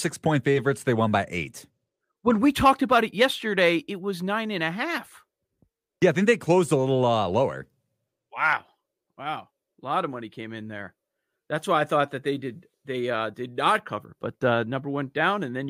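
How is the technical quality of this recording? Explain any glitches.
The technical quality of this recording is good, with no glitches to explain.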